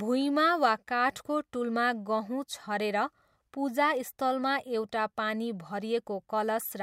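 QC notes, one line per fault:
No faults heard in this speech clip. Nothing to flag.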